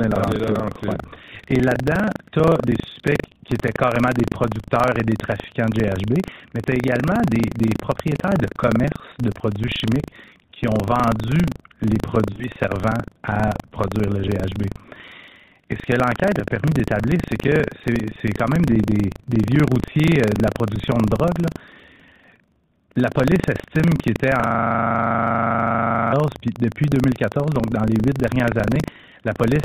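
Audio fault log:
Throughout, buffer tearing: a robotic rattle at about 25 Hz rides on the speech wherever there is signal. The writer and reader of the playback ring buffer have slipped, so roughly a tenth of each buffer plays audio from about 70 ms earlier, hard-joined on both sides.
12.32 to 12.47 s, lost AMR speech frames: the voice smears and warbles, then fades toward silence before recovering weak and rough. Three frames, 60 ms in all, failed their checks and the decoder stretched the last good pitch and vocal tract settings with falling gain.
24.42 to 26.13 s, system hang loop: a steady 25 Hz buzz replaces the speech, a single 40 ms fragment repeated exactly 43 times. The computer or driver stalled while the sound hardware kept cycling through the same buffer, a size consistent with a 40 ms period.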